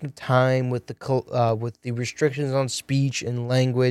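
Speech with CD scratch ticks just after "of time": six regular ticks from 0.76 to 1.98 s, the longest about 3 ms, from a blemish destroying data once per disc revolution. They show as thin vertical broadband lines on a spectrogram and tiny notches in the waveform.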